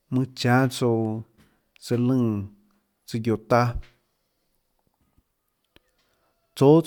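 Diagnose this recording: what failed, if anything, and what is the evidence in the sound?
Nothing in the speech stood out as a fault on careful listening, and no stage of the chain left audible evidence of failure.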